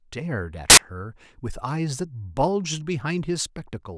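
At 0.70 s the speech is cut by a sudden burst of static lasting about 75 ms, to 0.77 s. This is file tags played as audio: a block of embedded metadata, here an embedded cover picture, has been read by the player as though it were sample data. Because the picture is compressed, its bytes look effectively random, so they come out as very loud white noise with abrupt, hard edges at both ends.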